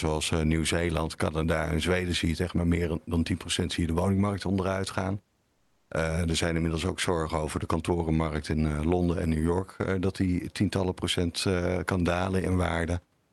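Right after "de woningmarkt onderuit gaan", from 5.53 to 5.89 s, comfort noise replaces the background: the room's detail gives way to a smooth, featureless hiss about 2 dB quieter, likely from discontinuous transmission. Unlike a dropout, the gap never falls silent.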